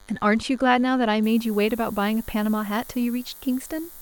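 DECT cordless phone buzz runs throughout the speech: a nearby handset or base station's radio bursts, rectified by the audio circuitry, leave a thin 100 Hz buzz with many harmonics, roughly 35 dB below the voice. Low bit depth with noise shaping appears from 1.23 s to the end. Coarse quantization, consistent with around 7 bits, pushes its rounding error upward, giving a steady hiss that climbs toward the top of the band, roughly 20 dB down.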